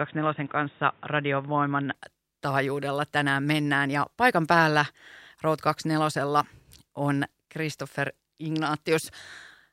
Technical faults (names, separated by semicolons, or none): input switched to a poorer device